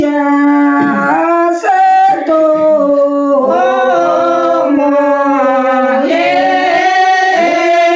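From start to finish, the level swings by roughly 5 dB, leaving loud and soft passages squashed close together. This is gain pumping, likely from input gain set far too high with a fast limiter or compressor clamping down on every peak, heard through the call microphone processing's band that stops at 8 kHz.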